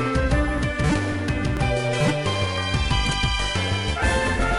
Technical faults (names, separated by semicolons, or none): overlap between stream segments